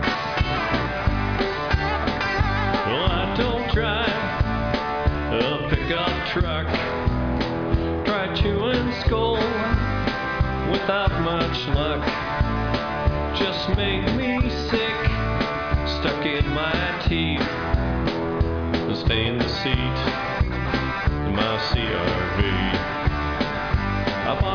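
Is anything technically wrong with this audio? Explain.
No, nothing technically wrong can be heard here.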